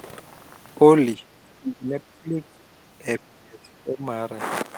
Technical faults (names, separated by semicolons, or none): speech suppressed in double talk